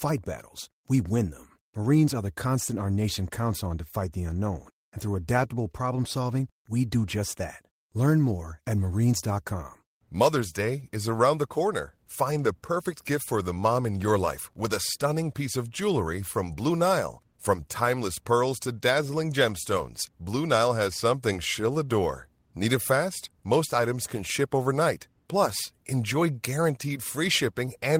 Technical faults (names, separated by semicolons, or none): none